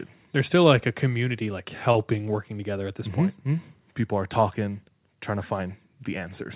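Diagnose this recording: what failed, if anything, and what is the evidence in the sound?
Network stage, short stall from a late packet: at 1.92–1.97 s, after "like a community like", the jitter buffer underran and stretched about 26 ms before "working together at this" resumed.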